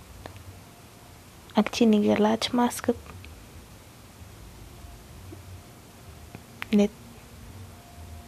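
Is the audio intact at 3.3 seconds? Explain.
Yes, the speech at 3.3 seconds plays through intact, with no fault present at that moment.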